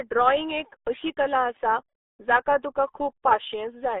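RealAudio 14.4 codec damage runs through the whole clip. The speech has been squeezed through a low-rate dial-up-era coder, and the heavy artefacts fit a budget of about 8 kbit/s. The band is confined to roughly 300 Hz to 3.6 kHz, with nothing above 3.8 kHz, so sibilants and air vanish. What survives sounds muffled, with a gargly, bubbling texture where the coder struggles to rebuild the waveform.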